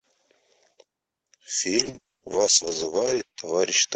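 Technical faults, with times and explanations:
1.78 s to the end, call bitrate drop: the speech turns rough, watery and duller up top, at its worst for 1.54 s, and doesn't recover. The call encoder was forced to code far more coarsely, which fits a fall from 48 to 8 kbps.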